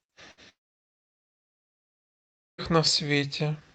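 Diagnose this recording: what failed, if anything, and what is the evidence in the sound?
At 0.31 s the speech is briefly stretched out and dies away, and the audio resumes at 0.40 s with about 60 ms of material gone. This is a burst of packet loss in the network stage. Several consecutive packets never arrived in time, so the receiver's concealment extended the last sound and faded it out before normal decoding resumed, skipping the lost portion.

From 0.49 s the sound again smears into a fading tail and then falls to near silence, which lasts until 2.61 s. Across those roughly two seconds, about 2.1 s of audio never reaches the listener. The likely cause is a long network dropout. With no packets arriving, the concealment could only stretch the last sound briefly before giving way to silence, and playback picks up later with the intervening speech missing. The resumed audio shows the call codec's band limit at 8 kHz.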